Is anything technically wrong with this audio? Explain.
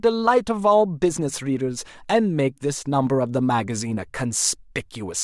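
No, nothing technically wrong can be heard anywhere in this speech recording.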